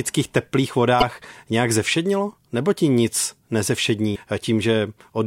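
A short glitch at 1.00 to 1.03 s, just before "nějak zevšednilo", and another at 4.12 to 4.16 s, come from damaged data in a compressed stream: corrupted bytes make the decoder misread those frames and lose sync until it finds the next frame header.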